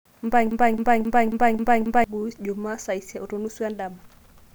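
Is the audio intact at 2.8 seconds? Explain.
Yes, at 2.8 seconds the speech plays through intact, with no dropout, click, distortion or other fault at that moment.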